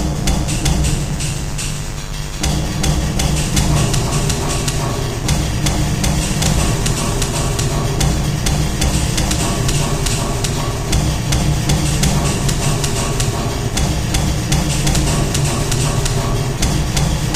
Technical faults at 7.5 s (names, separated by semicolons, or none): mains buzz